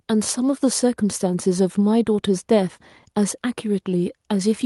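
No faults are audible in this speech; it has passed through a WebRTC call path whose codec limits the top end to about 12 kHz and adds its normal low-level coding texture.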